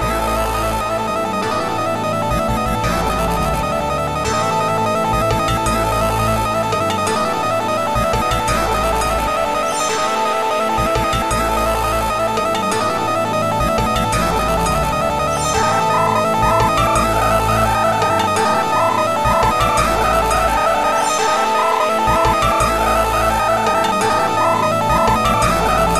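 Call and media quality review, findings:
No faults found on this pass, so nothing to chase here.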